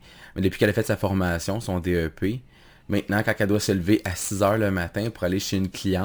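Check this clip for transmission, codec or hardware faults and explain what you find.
Crude rate conversion runs through the whole speech clip, from start to end. Samples were repeated to raise the rate, with no filtering, consistent with a step from 32 kHz to 44.1 kHz. The irregular pattern of repeats adds an inharmonic, gritty fizz, roughly 25 dB below the signal, that tracks loud and high sounds.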